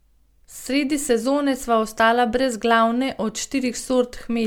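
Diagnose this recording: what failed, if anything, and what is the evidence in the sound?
The failure sits at the codec stage, and it runs through the whole speech clip. The sound is swirly and hollow, with smeared consonant attacks and added noise. Content stops at about 19.9 kHz, which fits an MP3 encoder around 128 kbit/s. The smearing is worse than that rate alone would produce, so the likely cause is generation loss: around seven decode and re-encode passes, each quantising on a shifted frame grid.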